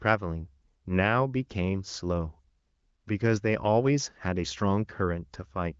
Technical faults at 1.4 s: none

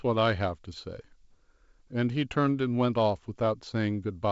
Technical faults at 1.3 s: none

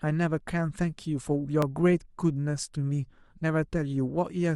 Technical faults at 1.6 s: overlap between stream segments

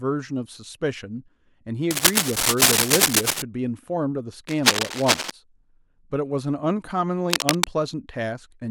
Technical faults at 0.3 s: none

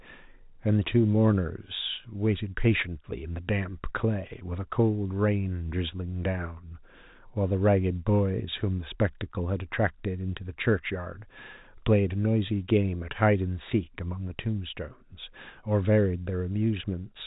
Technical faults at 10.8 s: none

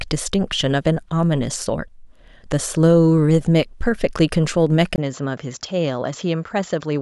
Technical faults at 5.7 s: input switched to a poorer device

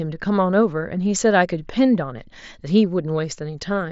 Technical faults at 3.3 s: none

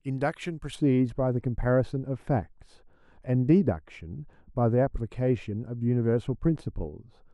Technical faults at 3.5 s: de-emphasis applied wrongly

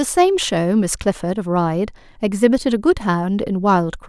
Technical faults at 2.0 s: none

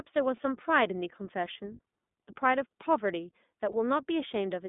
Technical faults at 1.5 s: iLBC codec

